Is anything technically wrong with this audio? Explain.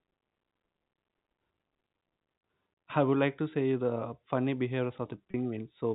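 Yes. There is a packet loss with pitch repetition from 5.31 to 5.34 s, a gap of 30 ms that fits a single lost packet. With that stretch of audio missing, the receiver filled the hole by looping the last pitch period it had. The result is a brief, slightly held and buzzy tone before the speech picks up again. The telephone-band G.711 coding around it plays as normal narrowband audio.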